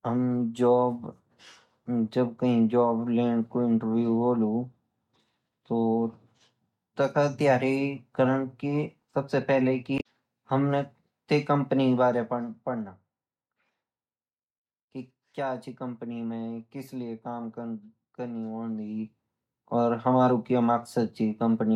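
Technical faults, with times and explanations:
9.97–10.06 s, damaged data in the compressed stream: just before "हमने ते कंपनी" a brief glitch breaks through. Corrupted bytes made the decoder misread the frames there, lose sync and hunt for the next valid frame header.
11.85–12.94 s, zipper noise: after "हमने ते कंपनी" the level drops by about 10 dB over roughly a second, with a fine ticking riding on the speech. The gain was applied in unsmoothed steps, around a hundred per second, and each step leaves a small click in the waveform.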